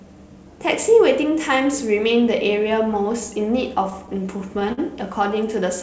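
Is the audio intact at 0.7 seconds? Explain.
Yes, the speech is intact at 0.7 s: it passes through the WebRTC call path normally, with nothing above 8 kHz, and no fault occurs at that moment.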